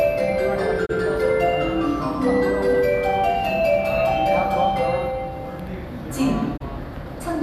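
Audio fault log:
0.85–0.91 s and 6.56–6.62 s, digital broadcast dropout: the sound fades out over about 20 ms and stays muted for about 24 ms, which fits the receiver discarding one corrupted frame.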